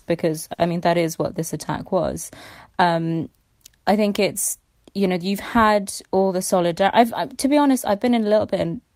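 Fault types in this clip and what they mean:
Short stall from a late packet: the buffer ran dry, so at 0.53–0.60 s, before "mean that is what", a sound is held 50 ms, showing flat, smeared harmonics.
Jitter buffer speed-up: at 6.06–6.69 s surplus buffered audio is cut in pitch-period slices, roughly 50 ms, so speech runs 7% faster at the same pitch, with spliced waveform cycles.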